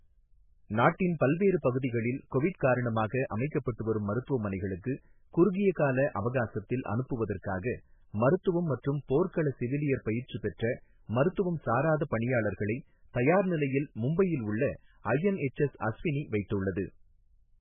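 Throughout, heavy MP3 compression is the likely cause. Starved of bits, the encoder removes everything above 3.5 kHz and drops weak detail, leaving the speech muffled, watery and swirly.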